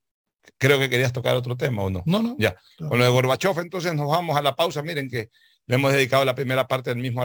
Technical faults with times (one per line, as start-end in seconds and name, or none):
0.00-7.25 crude rate conversion